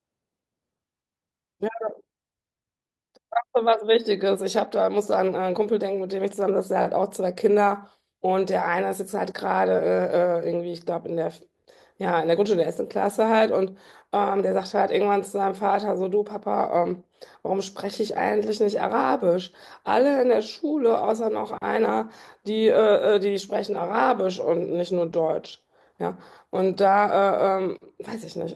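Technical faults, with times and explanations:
25.45–25.47 s, lost packet rebuilt from error correction: a short stretch of about 20 ms sounds rougher and noisier than the speech around it, but there is no gap or dropout. This fits a single lost Opus packet whose content was carried as a low-bitrate copy inside the following packet through in-band forward error correction. The decoder played that coarser copy in place of the missing frame, so continuity holds while detail briefly drops.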